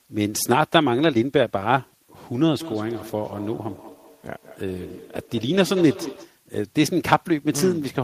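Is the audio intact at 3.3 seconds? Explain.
No. At 3.3 seconds the audio has two faults. The signal has been rounded to very few bits with dither added, which fits roughly 10-bit quantisation. The rounding error becomes a steady, even hiss about 40 dB below the speech, with no added distortion.

The moment also falls inside a feedback echo between two devices, running from 2.6 to 6.38 s. One device replays what the other's microphone sent, and that microphone picks it up again, outside either echo canceller's reach. The speech returns about every fifth of a second, thinner and more ringing each time, peaking about 16 dB below the direct speech.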